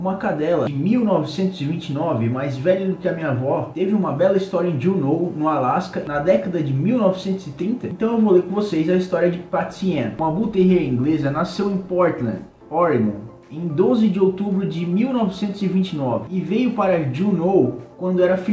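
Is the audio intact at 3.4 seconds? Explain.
Yes, the audio is intact at 3.4 seconds, with no dropout, glitch or distortion there; the sound comes through the call path as a band-limited signal with nothing above 8 kHz, which fits a wideband codec such as G.722.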